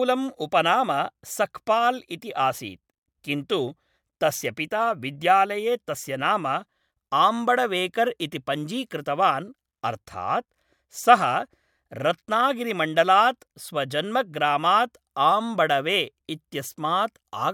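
No technical faults can be heard anywhere in this recording.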